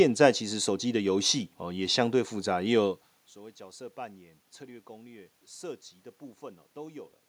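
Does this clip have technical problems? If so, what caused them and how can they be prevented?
No, there are no technical problems in this clip.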